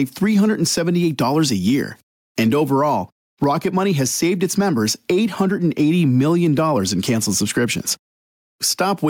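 The input gain is likely set far too high for the microphone, so a fast limiter or compressor has to clamp down on every loud moment throughout the recording. The result is gain pumping, with the level swinging by around 10 dB. Loud and quiet passages sit unnaturally close together, and the audio sounds squashed and breathing.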